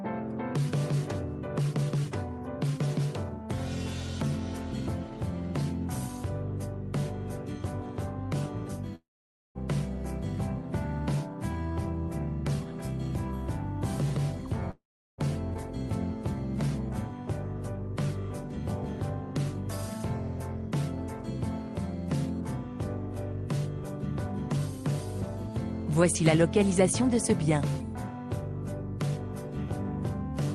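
From 8.95 to 9.58 s and again from 14.71 to 15.21 s, the last sound smears into a fading buzz and then drops to silence for about 0.52 s and 0.37 s respectively before resuming with a piece missing, the mark of a likely long network dropout rather than brief concealed packet loss.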